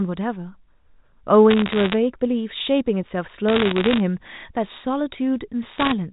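Bit errors on a digital phone line cause crackle at 1.50 to 1.94 s, 3.49 to 4.0 s and 5.78 to 5.92 s. Flipped bits corrupt single G.711 samples. A bad sample hit on a high bit ticks sharply. The last burst is densest, around 2 percent.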